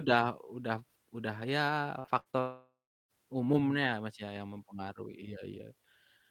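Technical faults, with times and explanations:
1.99–2.35 s, repeated packet loss (robotic sound): Right after "udah udah udah ya", the sound turns choppy and robotic. Short holes keep appearing, the longest about 60 ms. Each is patched by repeating the last sound, so about 140 ms of this stretch is filler.
2.39–3.11 s, long network dropout: The sound stops for about 0.7 s. A fading buzz or hiss continues the last sound, then about 0.31 s of silence follows. Audio resumes with the stretch missing. The likely cause is a network outage, with the receiver stretching the last sound over the gap.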